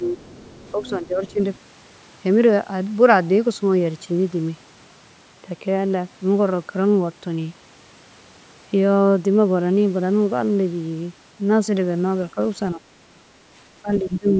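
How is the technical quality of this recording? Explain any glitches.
The recording has echo-control problems at both ends, with the other party audible underneath and the talker's level dropping in places. The call-style processing tops out around 8 kHz.

Speech suppressed in double talk, at 0.0–0.19 s, 0.72–1.41 s, 12.34–12.38 s, 12.75–13.21 s and 13.81–14.38 s. The echo canceller likely mistook the overlapping talk for echo and turned everything down, so the voice dips by roughly 10 to 20 dB.

Other side's voice leaking through, at 0.19–0.9 s, 1.27–1.33 s and 1.55–1.59 s. Loudspeaker pickup was likely left uncancelled, leaving a faint second voice in brief scraps well below the talker.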